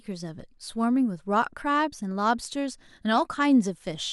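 From 2.47 to 2.52 s, the speech breaks into DAB burbling. For about 50 ms short blips of noise cut into the sound. Weak reception let bit errors slip past the error correction into the MP2 audio data. Corrupted samples put short blips of noise in single sub-bands, and wrong scale factors make sub-bands jump in level for up to a frame. The short burst points to a handful of damaged frames. That fits a low error rate, around a tenth of a percent.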